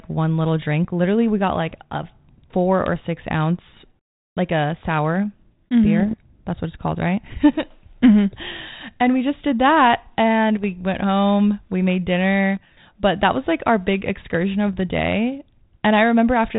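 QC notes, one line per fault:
5.99–6.15 s, bit errors on an ADPCM link: a short cluster of pops and rough, gritty bursts with quick jumps in level, riding on a G.726 path that sounds like 32 kbit/s, with light codec damage and nothing above 4 kHz. Each flipped bit throws off the decoder's step size and predictor, so the damage rings on for milliseconds after the error. The spread suggests hits across roughly eight frames, at an error rate well under one percent.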